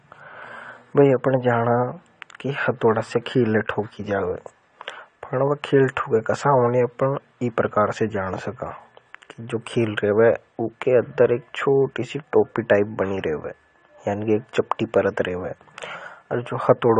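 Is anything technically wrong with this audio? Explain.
Yes. Throughout, the speech sounds dull and smeared, with fizzy, warbling sibilants. This is likely AAC compression at a low bitrate, around 32 kbps, which starves the upper spectrum of bits and leaves holes there. A plain low-pass filter would not warble like this.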